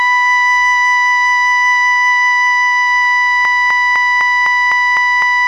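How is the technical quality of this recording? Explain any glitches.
The music has one serious fault, and it lasts until the end of the clip. From 3.45 s, a broken-record loop takes over. A 253 ms fragment repeats exactly, back to back, eight times. The likely cause is a player or stream that stalled and kept resending its last fragment. The music that belonged there is lost, replaced by a rigid, stuttering cycle.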